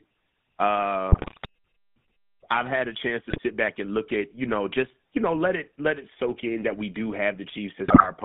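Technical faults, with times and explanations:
Throughout, GSM full-rate codec: The sound is band-limited to roughly 150 Hz to 3.6 kHz, with a plainly audible buzzy, gravelly roughness, which fits a 13 kbps GSM full-rate stream. The codec rebuilds the sound from a vocal-tract filter driven by a sparse, regularly spaced pulse excitation that keeps only every third sample. That coarse excitation gives the grainy, rasping texture, and everything above about 3.6 kHz is missing.
1.12–1.46 s, 3.30–3.41 s and 7.88–8.10 s, GSM bit errors: Each burst breaks into squawks, pops and gargling. Corrupted bits reaching the decoder scramble the filter, pitch and gain values, so frames come out with a bent spectrum or a sudden level jump. The first burst is the longest, about a third of a second and consistent with an error rate near 5 percent. The second is a brief 0.1 s hit, and the third lasts about 0.2 s.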